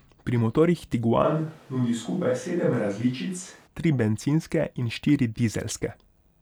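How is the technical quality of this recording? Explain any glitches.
The recording has one glitch, a switch to a distant microphone. From 1.25 s to 3.66 s, just before "tri bencinske in štiri", the voice abruptly turns roomy and hollow, with thinner bass, then snaps back. The loudness stays about the same, but room noise rises to roughly 30 dB below the speech. This is likely because the close microphone's signal dropped out and a farther one, such as a camera microphone, covered that stretch.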